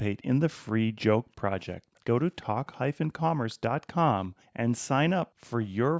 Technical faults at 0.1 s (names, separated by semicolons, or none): none